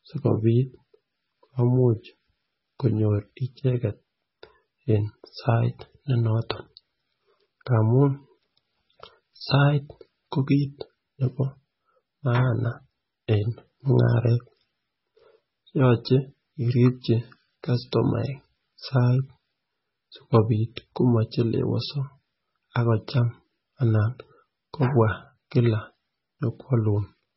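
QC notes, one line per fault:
Throughout, MP3 compression: the speech has nothing above 5.6 kHz, so it sounds dull and boxed in, with s sounds losing their hiss. The damage is heavy. Quiet detail swirls and gurgles, giving a watery texture, and consonant onsets smear. This points to a low bitrate around 16 kbps. The likely cause is an MP3 encoder starved of bits, cutting the treble at a fixed point and dropping weak frequency lines that flicker from frame to frame.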